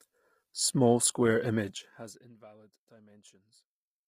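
From start to finish the speech carries heavy low-delay AAC compression damage. The voices sound rough and grainy, with a noisy fill between the pitch harmonics and a top band that sounds thinned and partly synthetic. This likely comes from an AAC-ELD encoder running at a low bitrate, which fits about 24 kbps. Its short frames resolve harmonics poorly and spend bits inefficiently.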